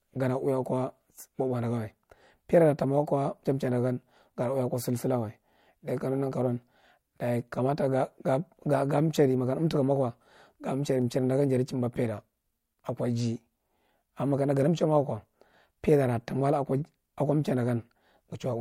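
At 11.02 s the speech carries a single sharp click, most likely from dropped samples: a handful of samples, a fraction of a millisecond of audio, went missing, so the waveform steps abruptly from one value to a later one instead of moving smoothly. Nothing audible is lost, only the tick of that discontinuity. On a waveform it shows as a vertical jump; on a spectrogram, as a thin vertical line running across the full frequency range.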